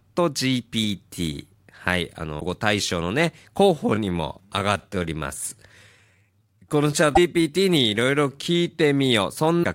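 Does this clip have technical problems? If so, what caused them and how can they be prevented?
Yes. Damaged data in a compressed stream produces brief glitches at 2.37–2.42 s, 7.12–7.18 s and 9.60–9.65 s. The decoder loses frame sync and resumes at the next header, so each blip is a short break rather than the steady crackle of clipping. Checksummed transfers and verified storage prevent it.

From 3.73 s to 9.03 s the pace drops to about 0.74 times normal while pitch holds, so the speech drags. This is likely a time-stretched section, where short repeated slices keep the pitch, unlike a slowed tape, where pitch falls too. Avoid fitting audio to a fixed length.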